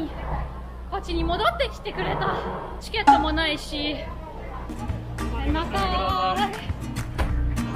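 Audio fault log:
Nothing stood out on listening to this audio.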